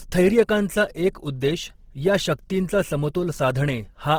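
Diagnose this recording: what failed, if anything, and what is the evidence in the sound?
Codec stage: Opus compression is the likely cause. Throughout the speech, tones sound plainly rough and grainy, fitting its music mode near 16 kbps, where starved bands are refilled with folded or noise energy. A spectrogram shows filled, noisy bands reaching 20.3 kHz, with few holes.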